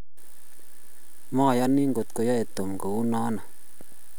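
A speech recording carrying a DC offset throughout, a constant shift of about -29 dBFS that wastes headroom and adds steady energy at the very bottom of the spectrum.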